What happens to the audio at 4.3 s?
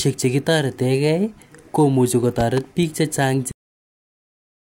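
Nothing plays at 4.3 s; this is a cut-off end. From 3.51 s to 4.79 s the final buffers were never written. The speech stops mid-sound into abrupt digital silence.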